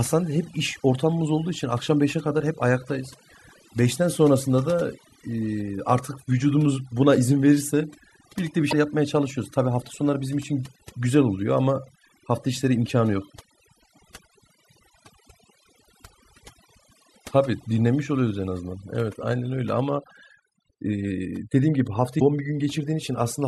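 From start to end the speech carries overdone noise removal. A noise reduction stage set far too hard has pulled individual frequency bands down or out whenever they sat near its noise estimate, taking the softer parts of the voice along with them. The background collapses to near silence sprinkled with twinkling specks. On a spectrogram the gaps between words look unnaturally black, dotted with isolated bright points, and the speech itself shows a ragged, patchy texture where weaker harmonics have been carved away.

Damaged data in a compressed stream then appears three times: 8.68 to 8.73 s, 14.44 to 14.49 s and 22.17 to 22.22 s, each about 50 ms long. Corrupted bytes in the encoded stream leave the decoder misreading frames and losing sync until it finds a valid frame header again. Each event is heard as a brief chirp, squawk, click or short hole. A spectrogram shows a brief break in the normal pattern, and the waveform shows a discontinuity at each point.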